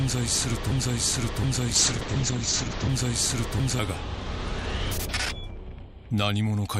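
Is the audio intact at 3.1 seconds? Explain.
No. At 3.1 seconds the audio sits inside a broken-record loop running from 0.72 to 3.79 s. The player, encoder or stream likely stalled and kept resending the last fragment it held, a piece about 0.72 s long. That fragment plays four times back to back, identically, so the sound stutters in a fixed cycle, and whatever should have played during those three seconds never arrives.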